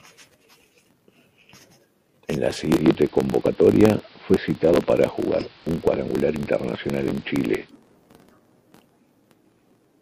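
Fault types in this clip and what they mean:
Filter restarted on every block: A filter in the processing chain loses its memory at each block boundary and begins every block from silence, so each block opens with a small transient. Throughout this speech the result is a steady buzz at about 43.1 Hz, which fits a 1024-sample block, and it grows and fades with the loudness of the talking, strongest in the louder syllables.
Digital radio blending to analogue: The receiver lost its digital signal at 2.72 s and cross-faded over about 105 ms to the station's AM analogue broadcast, then blended back at 7.72 s. During that stretch a hiss sits roughly 30 dB below the speech. The overall level stays the same, so the change is heard as added noise.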